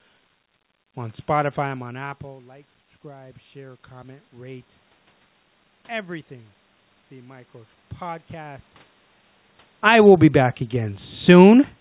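From 0.95 to 4.72 s, after the input drops about 18 dB, automatic gain rising lifts speech and room noise together by about 5 dB; a quicker rise of about 4 dB follows at 9.97–10.38 s. The waveform envelope and noise floor ramp upward.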